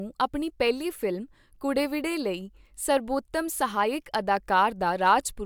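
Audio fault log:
No faults are present in this speech recording. Nothing in the audio calls for a timed entry.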